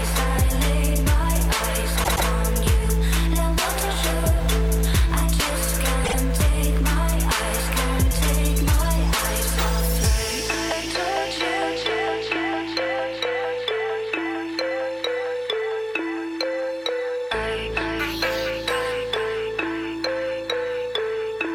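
A short run of compressed frames was delivered more than once, producing repeated frames: a 120 ms block replays twice at 2.03–2.27 s, and a 48 ms block twice at 6.04–6.15 s, each heard as a stutter.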